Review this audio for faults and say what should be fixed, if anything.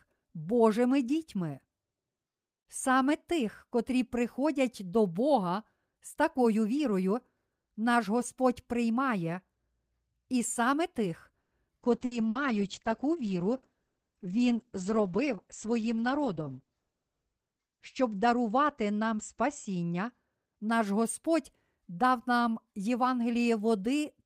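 At 11.41 to 11.54 s, right after "і саме тих", there is a call audio freeze. The speech stops and the last sound trails off into about 100 ms of near-silence, then carries on from where it stopped, so nothing is lost but a pause is inserted. The likely cause is packets held up in transit, which left the jitter buffer empty. On a waveform it appears as a short decaying tail followed by a flat stretch. A spectrogram shows a brief blank column. Prevention: give the jitter buffer enough headroom to absorb short network stalls.

From 11.85 to 20.36 s a call bitrate drop takes the encoding from 48 kbps down to 9 kbps, and it stays at the lowest rate for about 5.5 s. The audio bandwidth narrows from 20 kHz to 8 kHz, so the speech turns muffled and somewhat rough. On a spectrogram everything above 8 kHz is cut off with a hard ceiling, and the lower bands look coarser and smeared. Prevention: make the congestion controller react less sharply and recover its bandwidth estimate sooner.

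Two bursts of packet loss fall inside the low-bitrate stretch, at 12.05 to 12.14 s and 12.29 to 12.38 s. Each loses 60 ms of audio. The receiver fills each gap by extending the previous sound as a fading buzz or hiss and then jumps ahead, so part of the speech is missing. A waveform shows a repeated, shrinking pattern ending in a discontinuity. A spectrogram shows smeared, stretched harmonics that stop abruptly. Prevention: enable forward error correction or redundancy for the call's audio.

From 14.46 to 15.73 s a jitter buffer speed-up plays the speech at about 107% of normal speed while keeping the pitch. The buffer had built up excess delay, so it removed many short pitch-period slices, roughly a tenth of a second in total, and the speech sounds slightly hurried. On a spectrogram the harmonics stay at the same frequencies but syllables are compressed in time, and the waveform shows tiny splice points between cycles. 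Prevention: tune the buffer's target delay so it drains more gradually.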